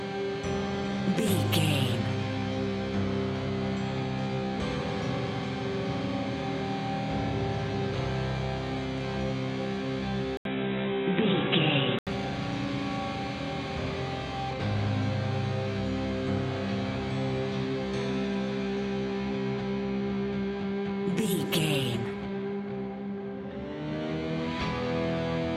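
At 10.37 s the audio drops out for about 80 ms, then comes back dull and boxy, with nothing above 3.9 kHz and a faint new background noise roughly 45 dB below the signal, while the level stays about the same. Full bandwidth returns at 12.07 s. The sudden narrowing, brief gap and change of noise floor point to an input switched to a poorer device, likely a fallback microphone or a headset's call profile.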